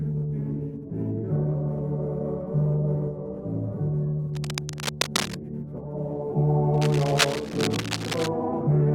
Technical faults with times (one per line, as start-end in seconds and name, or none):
4.34-5.35 cable scratch noise
6.74-8.29 cable scratch noise